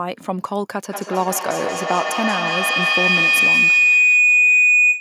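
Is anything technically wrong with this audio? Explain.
Yes. From 0.9 s to the end, a feedback howl takes over. Two devices on the same call are sharing the room, so sound from one loudspeaker re-enters the other microphone and comes back louder each pass. The repeats, roughly a fifth of a second apart, narrow to a shrill tone near 3 kHz that peaks about 7 dB above the speech. On a spectrogram this shows as a bright horizontal band; the waveform's envelope swells.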